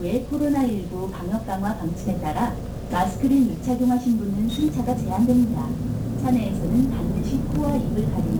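From start to finish the sound carries the signature of 1-bit DFPWM compression, and the damage is heavy. Each sample is reduced to a single up-or-down step that nudges an adaptive level toward the input. The constant stepping leaves a dense fuzz and crackle over everything, with the treble sunk beneath hiss, which fits a stream of about 48 kbps. On a spectrogram, broadband noise fills the whole frequency range as a grey wash. The waveform looks jagged and stair-stepped throughout.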